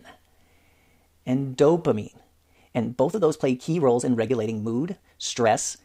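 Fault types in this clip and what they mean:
Time-stretched section: software likely compressed the last part of the speech to fit a shorter length, keeping pitch by dropping short slices. From about 1.87 s to the end, the pace jumps to roughly 1.83 times normal at unchanged pitch, sounding rushed.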